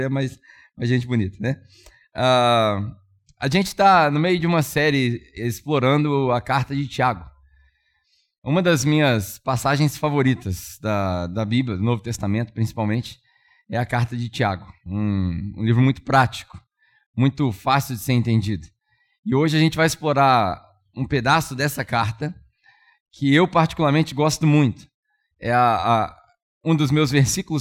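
No technical faults can be heard anywhere in the speech recording.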